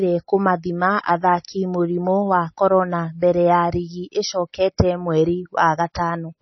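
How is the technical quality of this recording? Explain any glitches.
Poor: heavy coding damage runs through the whole speech clip. Throughout, MP3 compression is likely, with nothing above 5.9 kHz and a watery swirl as starved frequency lines flicker, unlike a plain low-pass filter, which is dull but steady. The damage suggests a very low bitrate, near 27 kbps.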